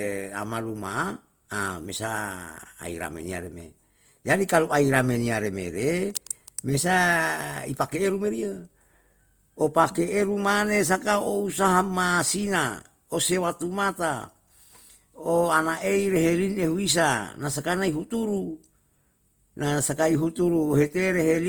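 From start to finish the speech has a grainy, rough edge: the upper range is filled in with a noisy texture rather than dropping out, though the full bandwidth is kept. That's likely Opus compression in its music-style CELT mode, which fits a rate of around 24 kbps. It holds on to each band's energy but fills in missing detail with noise, so it turns crunchy instead of swirly.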